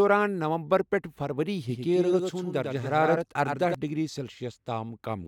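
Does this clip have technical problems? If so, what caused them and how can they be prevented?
Yes. A doubled audio track runs from 1.69 to 3.75 s, right after "نومبر پیٹھ فروری". A second, full-band copy of the speech trails about a tenth of a second behind, about 5 dB quieter, with no room decay. It switches on and off abruptly. The likely cause is the audio being captured a second time through a slower path, or an edit leaving two misaligned copies. Prevent it by routing each source only once and checking edits for overlapping duplicate regions.

Damaged data in a compressed stream causes a short blip at 3.16 s. Corrupted bytes in the encoded stream made the decoder misread the frame there and lose sync until it found the next valid frame header. Prevent it with reliable transport or storage, checksums, and keeping metadata out of the audio data.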